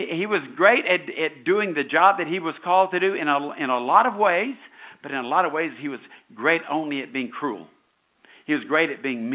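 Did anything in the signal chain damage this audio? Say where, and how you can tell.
No, nothing in the chain damaged this speech.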